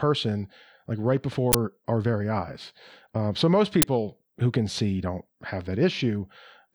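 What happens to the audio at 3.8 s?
At 3.82 s the speech is interrupted by an uninitialised buffer: for about 11.6 ms the playback chain outputs a block that was never filled with audio, so whatever values were left in memory are played as samples. The result is a brief, loud crack unrelated to the surrounding speech. Its length matches a single block, which fits a 512-sample buffer.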